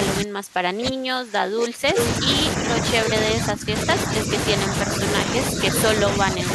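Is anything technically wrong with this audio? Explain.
Yes. The speech is suppressed in double talk at 0.2 to 1.98 s, 3.32 to 3.88 s, 4.07 to 4.3 s, 5.51 to 5.59 s and 6.01 to 6.47 s, likely because an echo canceller turned the talker down while both sides spoke. The voice dips by up to about 30 dB in the first stretch, about 15 dB in the second, and about 5 dB in the rest.

There is also an echo leak from 1.97 to 2.08 s, likely because a loudspeaker echo passed the canceller uncancelled. A copy of the voice delayed by about 0.35 s comes back roughly as loud as the speech itself.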